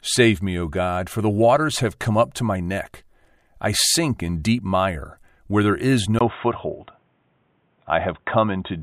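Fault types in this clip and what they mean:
Input switched to a poorer device: from 6.19 s, after "mire where there is", a 20 ms gap, then duller sound with nothing above 3.8 kHz, likely another microphone taking over.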